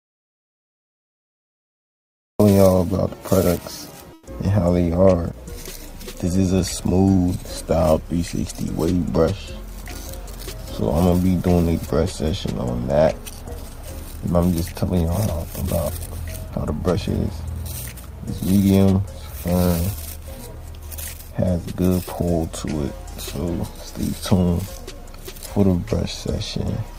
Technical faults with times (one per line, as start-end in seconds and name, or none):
0.00-2.40 audio dropout to silence
4.13-4.27 comfort noise in place of the background